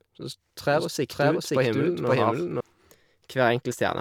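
From 0.7 to 2.6 s the speech is doubled: a second, equally loud full-band copy trails about half a second behind, likely from a slower capture path mixed back in. Unlike room echo, it has no decay or reverberant colour, and it starts and stops abruptly.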